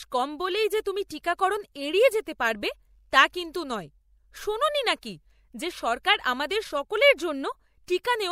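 A speech clip with one corrupt frame decoded at 2.1 s, between "যে তুমি টিকাকরণ এড়িয়ে" and "যেতে পারবে তা কিন্তু": a brief, quiet blip, around -35 dBFS, where damaged bits in a single frame were played anyway.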